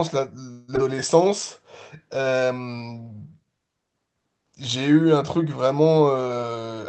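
From 0.51 to 0.70 s the speech stops moving and a buzz or hiss continuing the last sound fills 165 ms before the speech resumes where it left off, with nothing lost. This call audio freeze is likely a late-packet stall that emptied the jitter buffer, forcing the receiver to improvise until delivery caught up.

Just after, around 0.76 to 0.79 s, the speech jumps forward with almost no gap. About a tenth of a second is simply gone, the two sides butted together. This skip ahead happens when a stretch is discarded while later audio is already queued.

Between 1.97 and 2.78 s the speech drags to 89% speed at unchanged pitch, with stretched sounds. This jitter buffer slow-down comes from the receiver repeating single pitch periods many times to add 93 ms of reserve while its buffer ran low.

From 6.43 to 6.77 s the speech turns hurried, running at 121% speed without any pitch rise. In this jitter buffer speed-up the receiver trimmed short pitch-period pieces repeatedly, removing roughly 70 ms to shrink an overfull buffer back toward its target delay.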